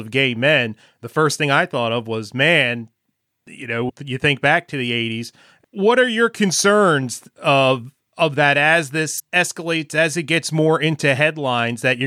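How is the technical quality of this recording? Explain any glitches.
The speech is interrupted twice by short digital glitches. At 3.85 to 3.91 s and again at 9.16 to 9.20 s, a brief glitch cuts through the audio. Both come from damaged data in a compressed stream: corrupted bytes made the decoder misread those frames and lose sync until it found the next valid frame header.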